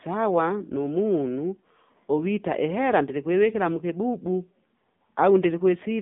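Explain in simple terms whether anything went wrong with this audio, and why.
Throughout the speech, the voice sounds thin, muffled and plainly buzzy and robotic, like an old mobile phone call. That is the AMR narrowband mobile codec: the phone-call format squeezes the voice into very little data and discards everything above about 3.6 kHz.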